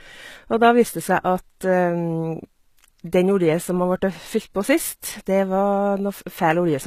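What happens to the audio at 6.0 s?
HE-AAC compression is likely at work around 6.0 s, as throughout: treble rebuilt from lower bands sounds gritty and lispy, with nothing above 14.9 kHz, pointing to about 20 kbps.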